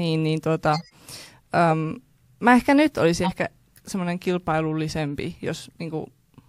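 At 0.73 to 0.94 s there's a corrupt frame decoded, actually a run of a few damaged frames, and at 3.23 to 3.32 s a single one, a bit louder. Flipped bits put energy at wrong frequencies, giving short squeaky, noisy bursts over the speech.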